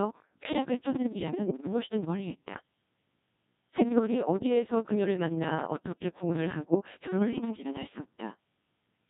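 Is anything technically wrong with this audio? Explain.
Yes, three faults are audible.

Throughout the clip, the speech passes through the Codec 2 vocoder, which sends only pitch, voicing, energy and a coarse spectral envelope, then rebuilds the voice from sine waves. The damage here is heavy, consistent with its 1.6 kbit/s mode, so the speech sounds robotic and buzzy, with the original waveform gone.

From 0.09 s to 9.06 s, periodic USB or driver dropouts occur. Something stalls the audio path every 54 ms, and roughly 10 ms of signal is skipped each time, well over a hundred times in all. The result is a steady train of ticks, with the speech jumping slightly forward at each one.

Between 3.72 s and 3.83 s, bit errors on digital voice radio strike. Corrupted bits reach the vocoder, where each bit steers a whole frame's pitch, level, voicing or spectrum. The length fits about two damaged frames. 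For that moment the voice lurches in pitch and tone, warbling into synthetic gibberish.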